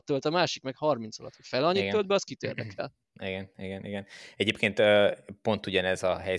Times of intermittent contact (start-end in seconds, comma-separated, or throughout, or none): none